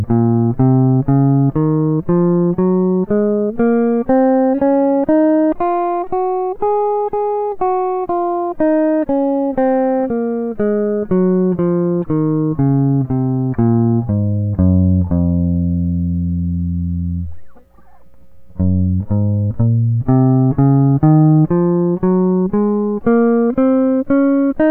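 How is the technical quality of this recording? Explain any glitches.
The music arrives intact, with no technical faults anywhere in the recording.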